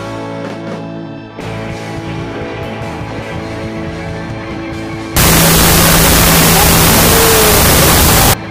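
The audio has a wrong sample width fault from 5.17 s to 8.34 s. Data written as 16-bit integers are read as unsigned 8-bit bytes, so mismatched bytes form noise over the buried original, which plays at half speed and an octave low.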